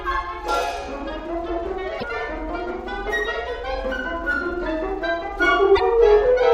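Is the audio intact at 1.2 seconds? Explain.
Yes, the music plays through 1.2 s intact, with no dropout, click, distortion or other fault at that moment.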